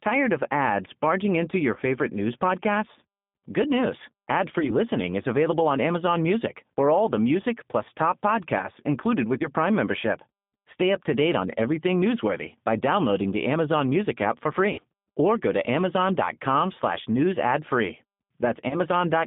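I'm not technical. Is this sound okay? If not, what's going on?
No. The whole recording has passed through the G.729 codec, a phone-call compressor that rebuilds speech from a rough model of the voice. It sounds narrow, like a phone line, and a little rough and robotic. That is compression damage, not a bad microphone.

There is also VoIP packet loss concealed by the speech codec at about 1.74, 4.60, 9.38, 14.73 and 18.69 seconds. Each time, bits of the call went missing and the decoder filled the gap by stretching the last sound into a brief buzzy smear that fades, instead of leaving silence.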